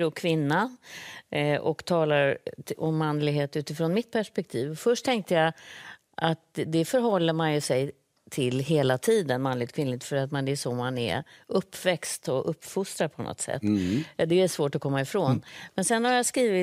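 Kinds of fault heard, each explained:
No technical faults can be heard in this speech recording. Nothing in the audio points to a problem in how it was captured or carried.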